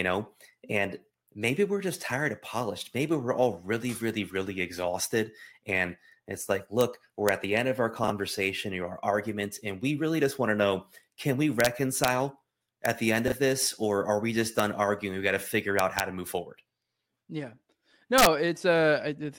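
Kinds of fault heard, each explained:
Integer overflow: a gain or sum stage exceeded the largest integer value and wrapped to the opposite sign instead of limiting, so peaks flip across the full range. In this speech it gives violent, sharp cracks on loud moments, from about 6.8 s to 18.3 s, pushed up to about 4 dB past the limit.
Chunks out of order: audio blocks were written late and play after those meant to follow them, which fits 20 ms chunks. Nothing is lost, but the order breaks at about 8.04 s and 13.28 s, heard as brief jumbled moments.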